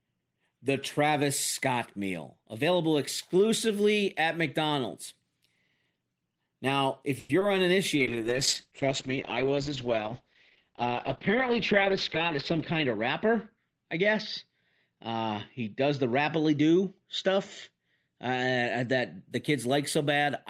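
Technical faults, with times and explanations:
7.19–7.31 s, call audio freeze: The speech stalls for about 100 ms, with the last sound drawn out as a fading continuation rather than dropping to silence, and then it carries on from exactly where it left off with nothing skipped. The likely cause is packets held up in transit until the jitter buffer ran dry, so the receiver stretched what it had and the playback delay grew by about 100 ms.
7.39–7.43 s, short concealed packet loss: About 20 ms of audio never reached the decoder in time, and the receiver covered the hole by extending the preceding sound before blending back into the real signal. Because that 20 ms is genuinely gone rather than delayed, the result is a brief smear or wobble, and any short consonant falling in that spot can disappear entirely.
7.99–19.29 s, call bitrate drop: The link's bandwidth estimate fell and the encoder was pushed from 32 kbps down to 8 kbps, staying at its lowest for about 4.5 s. 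At that rate the codec quantises much more coarsely and narrows the audio band from 20 kHz to 8 kHz. The speech therefore turns rough, watery and muffled, losing its crisp sibilants, until the rate climbs back just after 19.3 s.
12.35–12.95 s and 17.71–18.08 s, jitter buffer speed-up: In both spans the buffer was holding more audio than its target, so the receiver repeatedly cut out pitch-period-sized slices, removing around 40 ms in each span. The first span plays at about 106% speed and the second at about 109%, with the pitch unchanged. As a result, the speech sounds hurried.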